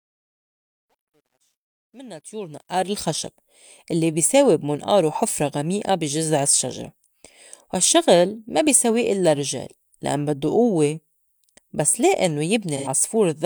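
Right at the start, the fade-in that runs from the beginning up to about 2.98 s has truncation distortion. The gain stage is dropping bits without dither, so as the level sits near the bottom the waveform collapses into coarse square steps. From 0.0 to about 2.13 s it's at its worst: gritty. The grain points to something like 11-bit resolution at that stage. Once the fade climbs, it smooths out.

Near the end, right after "بس لي إنّو", there's AAC frame loss with concealment from 12.77 to 12.88 s. About 85 ms of coded audio never made it, which fits two lost frames. The decoder patched the gap by reusing and reshaping the last good spectrum, so instead of a dropout you get a short smeared, noisy, phasey blur where the speech should be crisp.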